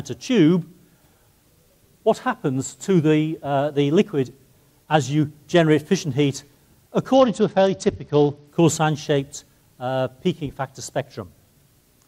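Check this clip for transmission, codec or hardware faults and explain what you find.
One fault is present, a Bluetooth SBC bit pool drop. From 7.14 to 8.47 s the treble dulls and gritty noise rises, which fits the bit pool falling from 28 to 9, near 78 kbps, on a congested link. Upper sub-bands get few or no bits; the rest are coarsely quantised until the rate recovers.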